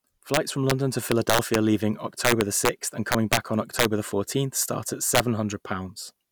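Violent, splintering cracks break out on the loudest parts of the speech at 0.34 to 0.71 s, 1.12 to 1.55 s, 2.25 to 2.69 s, 3.12 to 3.37 s, 3.79 to 3.85 s and 5.15 to 5.20 s, far harsher than ordinary clipping. This is integer overflow: the signal was driven about 2 to 6 dB past the largest integer value, and instead of being held at the limit each peak wrapped around to the opposite sign, jumping across the full range.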